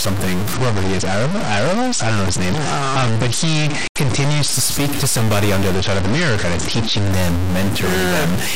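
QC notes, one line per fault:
Throughout: stuck bit. Distortion rides on the speech and pauses fill with hiss, likely from one converter bit stuck; the waveform shows a fixed-step offset and the spectrogram a broadband noise floor.
0.54–4.53 s and 5.74–7.11 s: Bluetooth SBC bit pool drop. Treble dulls and gritty noise rises, pointing to a bit pool falling from about 28 to 9 (near 78 kbps); the spectrogram's upper bands thin out.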